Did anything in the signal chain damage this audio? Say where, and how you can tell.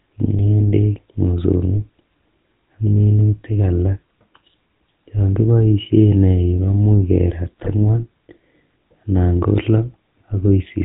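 Yes. The codec stage did it: the whole clip has the buzzy, gravelly roughness of the GSM full-rate codec, plainly audible, with nothing above 4 kHz. A pulse-driven vocal-tract model at roughly 13 kbps simply can't carry the finer excitation detail or the upper band.

The network stage shows GSM bit errors from 7.58 to 7.74 s, a short burst of squawk and gargle. Flipped bits corrupt the filter, pitch and gain values, so each hit frame decodes with a bent spectrum or jumped level. That fits an error rate near 3%.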